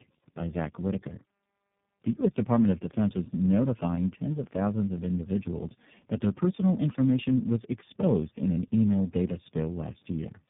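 Tandem speech coding affects the whole clip. The speech was decoded and re-coded at each link, and each coder degraded the last one's output. The damage fits three speech codecs in a row. Nothing is heard above 3.7 kHz. It sounds rough, muffled and warbly.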